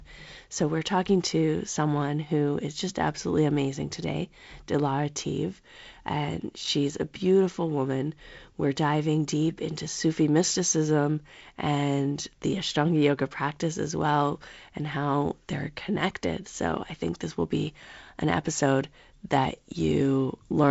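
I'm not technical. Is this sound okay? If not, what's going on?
Yes, this sound is okay, with nothing going wrong in it.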